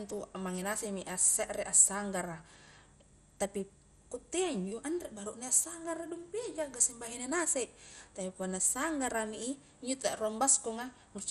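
From start to end, the speech carries a dull, gurgling, granular texture, with nothing above about 14.3 kHz and the remaining high bands flickering in and out. This is likely MP2 compression at a low rate, fitting something near 64 kbps, where too few bits force upper sub-bands off and coarsely quantise the rest. Unlike a plain low-pass filter, the damage churns and shimmers rather than simply muffling.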